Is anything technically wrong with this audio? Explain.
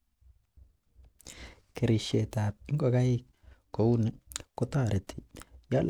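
No, nothing technically wrong.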